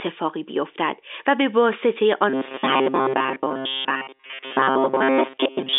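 From 2.30 s to 5.78 s, new audio was likely reaching the playback side too seldom, so the software kept refilling the gaps by looping the last short buffer, about 7.5 ms long, while most of the real audio was skipped. This is robotic sound from repeated short buffers: the loop imposes a fixed 133 Hz buzz on the speech, turning it rigid and metallic while it still loosely tracks the phrasing, all within the narrow telephone band of the G.711 line.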